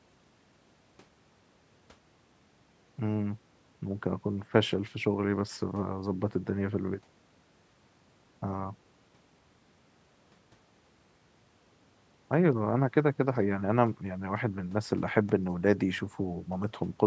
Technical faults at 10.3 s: none

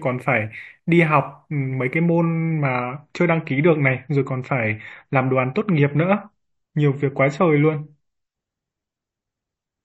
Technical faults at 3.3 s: adaptive stream at a lower bitrate

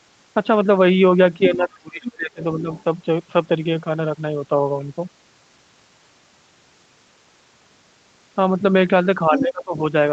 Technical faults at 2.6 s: speech suppressed in double talk

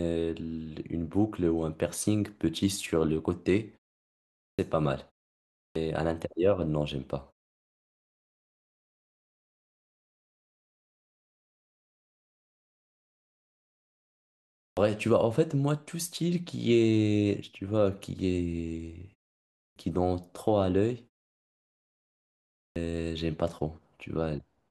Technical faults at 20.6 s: none

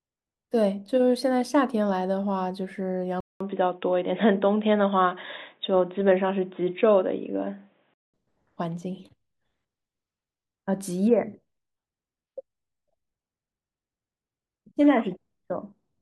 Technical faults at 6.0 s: input switched to a poorer device

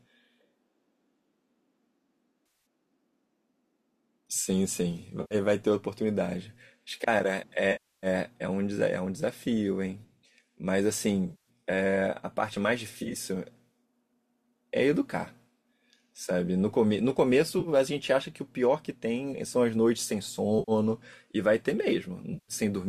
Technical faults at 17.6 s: AAC frame loss with concealment

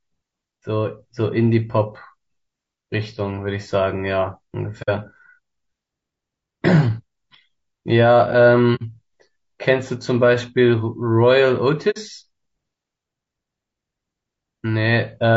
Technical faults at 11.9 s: low-delay AAC compression; AAC frame loss with muting

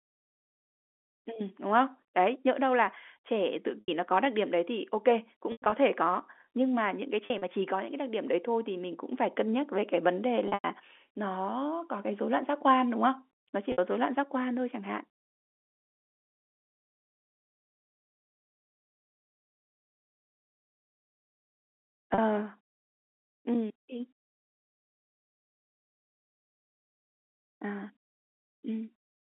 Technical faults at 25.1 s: none

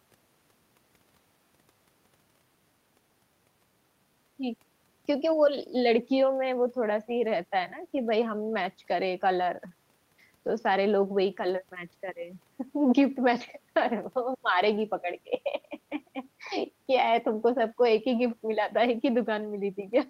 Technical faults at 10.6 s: none

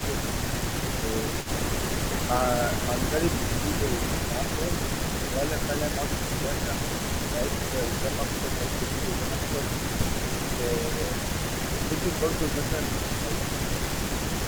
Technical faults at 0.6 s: echo leak

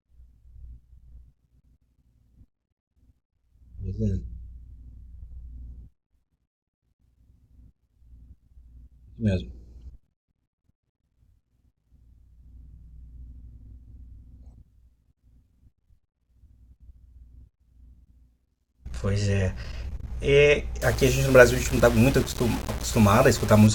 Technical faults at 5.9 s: none

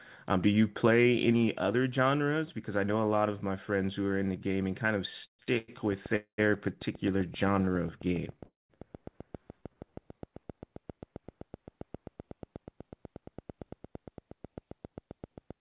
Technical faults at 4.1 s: none

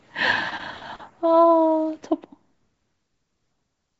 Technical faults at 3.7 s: none

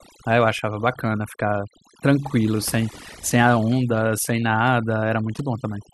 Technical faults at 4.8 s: overdone noise removal

